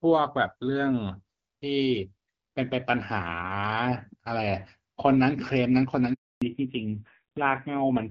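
At 6.14 s the speech cuts off in a handover gap: while the call switched networks, no frames arrived, so the sound dies within a few tens of milliseconds and stays silent for 280 ms, until 6.42 s. The waveform shows a flat line, and the spectrogram a blank vertical band.

From 6.42 s to the end, a fallback to narrowband takes over. The light, clear HD Voice sound before it fits AMR-WB at around 12.65 kbit/s. The call then drops to an older narrowband codec, with nothing above 4 kHz, and a duller, rougher tone that points to AMR-NB at a low rate near 5.9 kbit/s. The spectrogram shows energy abruptly cut off at 4 kHz.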